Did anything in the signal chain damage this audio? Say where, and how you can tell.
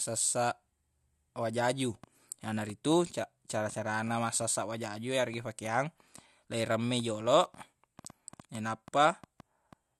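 Yes: a train of clicks runs from 2.04 s to 9.74 s, about 3.25 per second at uneven spacing, roughly thirty similar pops reaching about the speech's own level, audible in the pauses too. The likely cause is electrical interference coupling into the analogue wiring.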